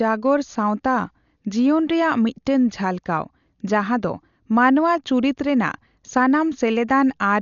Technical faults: Dolby Digital compression

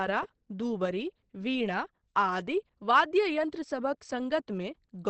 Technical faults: Opus compression

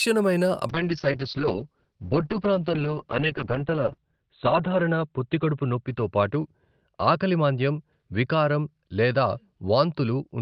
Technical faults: call bitrate drop

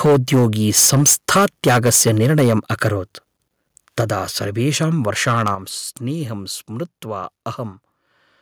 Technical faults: microphone overload; microphone volume stepped down

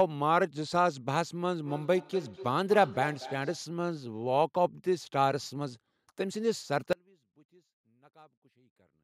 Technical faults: feedback echo between two devices; audio dropout to a faint residue

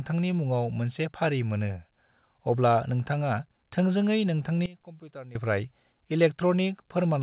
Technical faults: sudden gain jump

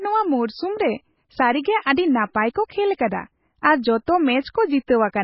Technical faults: MP3 compression

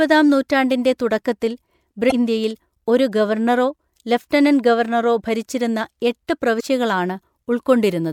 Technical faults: damaged data in a compressed stream

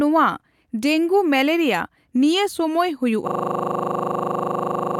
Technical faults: system hang loop

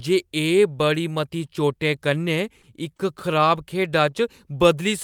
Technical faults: short concealed packet loss; short stall from a late packet

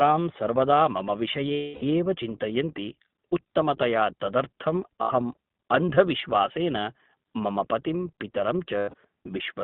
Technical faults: iLBC codec; lost iLBC frames

